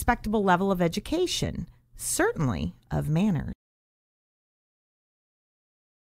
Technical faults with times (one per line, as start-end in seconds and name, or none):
3.53-6.05 audio dropout to silence